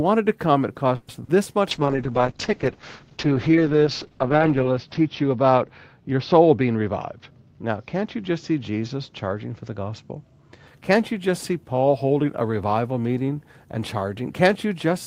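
A speech recording of about 15 s with three call-path faults. From 0.95 s to 1.10 s the sound stalls: the last fragment is stretched into a short fading buzz for about 130 ms, and then the speech resumes exactly where it left off, with nothing lost. That is a call audio freeze, likely caused by packets arriving late enough to drain the jitter buffer, so the receiver filled the wait and the playout delay grew by the same 130 ms. At 1.73 s a call bitrate drop sets in and lasts until 10.73 s. The encoder rate falls from 32 kbps to 7 kbps, and the audio bandwidth narrows from 20 kHz to 6 kHz. The speech loses its top end and turns muffled and coarse, with a watery grain that is worst over the 2.8 s spent at the lowest rate. Overlapping this, from 6.39 s to 7.77 s, a jitter buffer speed-up makes the speech run at about 109% of normal pace without any change in pitch. The buffer was holding more audio than its target, so the receiver trimmed short pitch-period slices repeatedly, roughly 150 ms in total, to bring the delay back down. 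The result sounds hurried across that stretch.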